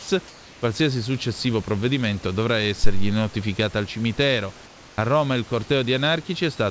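Sound dropped by the voice detector, 0 to 0.08 s: the opening of the clip, just before "qualsiasi successivo provvedimento dovrà", is cut away for about 70 ms and replaced by flat noise. The sender's voice detector likely judged this opening to be background and stopped transmitting, so the receiver substituted synthetic noise until the detector triggered on the speech and real audio resumed.

Comfort noise in place of the background, 0.28 to 0.62 s and 4.66 to 4.98 s: in the first pause, again before "qualsiasi successivo provvedimento dovrà", and in the later gap, the natural room background, sitting about 25 dB below the speech, gives way to a steady, textureless hiss about 2 dB quieter. This is likely discontinuous transmission, where the sender goes silent between utterances and the receiver generates noise roughly matched to the background, losing its detail until speech returns.

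Phantom power thump, 2.84 to 3.18 s: between "dovrà" and "al cimitero" a deep low thump appears and decays over about 78 ms. A supply switched on or off on a live microphone input sends a voltage step through the coupling capacitors, producing this dull, deep knock. The G.722 call path carrying the audio passes nothing above 8 kHz.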